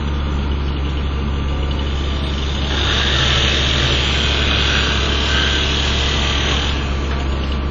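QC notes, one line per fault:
Throughout, WMA compression: the audio was likely squeezed through a Windows Media Audio encoder at a low bitrate, fitting roughly 32 kbps. Long transform blocks smear quantisation noise and weak components are dropped, so the sounds ring and wash, with breathing hiss and nothing above 8.6 kHz.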